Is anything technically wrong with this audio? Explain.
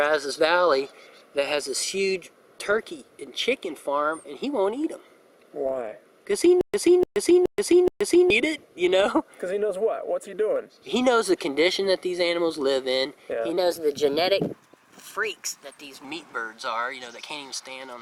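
Yes, there are two faults.

From 6.61 to 8.30 s there is a stutter with silent gaps. A 296 ms fragment repeats four times, each followed by about 127 ms of dead digital silence, so it returns every 423 ms. This likely comes from a stalled stream that replayed its last buffer on each retry. The silent gaps and the exact repeats set it apart from an ordinary dropout.

From 13.57 to 16.05 s there is a section at the wrong speed. It plays 1.12 times too fast, which raises the pitch by roughly two semitones and also hurries the timing. The likely cause is resampling to the wrong clock. Because tempo and pitch move together, this is a speed error and not a pitch-shift effect.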